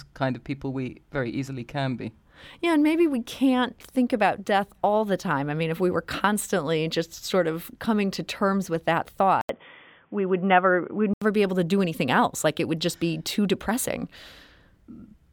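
At 9.41 s the speech drops out for a gap of 80 ms, then returns band-limited, with nothing above 3.5 kHz, so it sounds dull and boxy. A new, low background noise appears, roughly 50 dB under the speech, while loudness stays about the same. At 11.22 s full bandwidth returns. The likely cause is the input switched to a poorer device, a narrower-band microphone or headset call profile with its own tone and noise.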